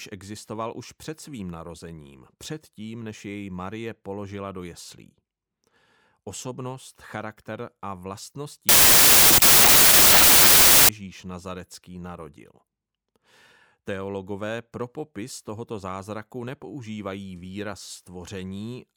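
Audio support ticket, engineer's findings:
Wrong sample width, 8.69–10.89 s: speech collapses into loud noise, original faintly audible, running 1.5x fast and pitched up. 16-bit data read as packed 24-bit, so bytes straddle samples. Speed shift rules out a byte-order swap, which keeps timing.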